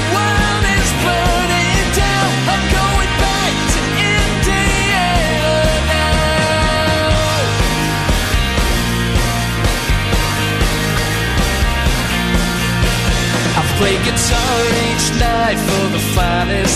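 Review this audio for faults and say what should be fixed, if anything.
At 10.96 s there is a brief glitch caused by damaged data in the compressed stream. Corrupted bytes made the decoder misread the frame at that point, lose sync, and resume at the next valid header. Transfer or store the file with checksums and replace it with a verified copy.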